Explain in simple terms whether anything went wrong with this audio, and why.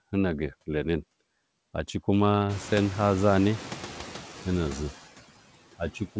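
There are noise suppressor artifacts all the way through. The suppressor keeps cutting the background noise between words and letting it back in under the speech, so you hear it pump. Once the room noise gets louder, at around two and a half seconds, that pumping noise is louder too.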